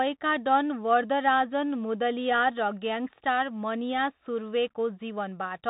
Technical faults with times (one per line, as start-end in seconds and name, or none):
0.00-5.69 Bluetooth CVSD headset codec